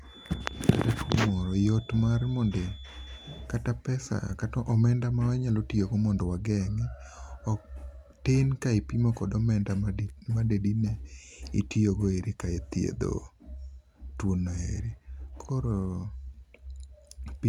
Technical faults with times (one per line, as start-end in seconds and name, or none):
0.00-3.50 feedback whistle